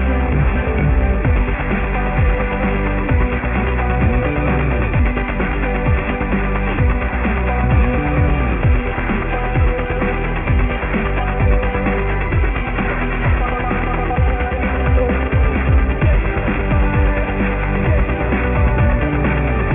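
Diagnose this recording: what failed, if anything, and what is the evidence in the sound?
The failure is aliasing at the sample-rate conversion stage, present for the whole clip. The top of the band sounds gritty and metallic, and the spectrogram shows energy running hard up to a ceiling at 3 kHz, with mirrored, unrelated components folded back below that edge. That fits a drop from 48 kHz to 6 kHz made without an anti-alias filter. Content above 3 kHz reflects downward, and these false components sit only about 10 dB under the real sound.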